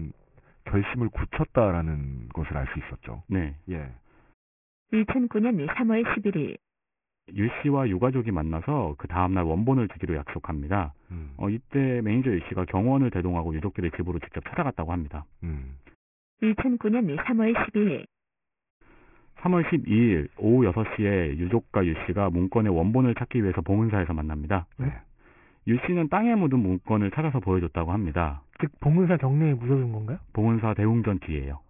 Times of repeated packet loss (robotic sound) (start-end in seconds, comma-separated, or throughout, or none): none